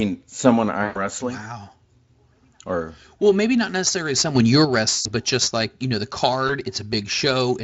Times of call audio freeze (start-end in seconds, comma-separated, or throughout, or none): none